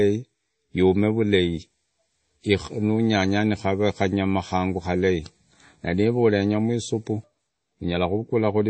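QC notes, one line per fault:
Throughout, MP3 compression. The speech has nothing above 8.4 kHz, so it sounds dull. S sounds turn swirly and chirpy, and the tone is plainly watery. The likely cause is a starved encoder dropping treble and weak frequency lines, which fits a bitrate near 32 kbps.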